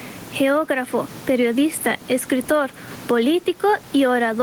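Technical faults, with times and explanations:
Throughout, gain pumping: the gain is pulled down on each loud sound, a swing of around 15 dB, with the room noise about 31 dB below the speech. This is likely an input gain set far too high, with a fast limiter pulling it down on peaks.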